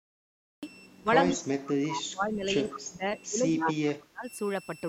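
A switching supply whistle runs under the whole speech clip. It is a thin, high tone that wanders between 2.69 and 2.72 kHz. It sits roughly 25 dB below the speech. A switching power supply nearby is running in an audible burst mode or beating against another supply. The small pitch drift follows changes in its load. It never stops.

The clip opens with a cut-off start. From 0 to 0.63 s there is only digital silence. At 0.63 s the audio starts abruptly in the middle of a sound. There is no natural attack and no fade-in. The recording or stream began late, so whatever came before that point is simply missing. The entry is hard and sudden rather than a clean beginning.

From 0.99 to 4.26 s the talker's level keeps collapsing. In total, about 3 s of this stretch is affected. The voice dips, loses its top end and drops out in pieces. At its worst it falls roughly 30 dB. This is likely speech suppressed in double talk. 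Both ends were talking at once. The echo canceller could not tell its own talker from the loudspeaker echo, so it turned everything down.

Two bursts of echo leak fall inside that stretch. The first, from 2.68 to 2.79 s, is a faint delayed copy about 15 dB under the speech. The second, from 3.59 to 3.74 s, is as loud as the speech itself. Both trail the original by 145 ms. The likely cause is a far-end loudspeaker whose echo canceller let part of the microphone pickup back into the call.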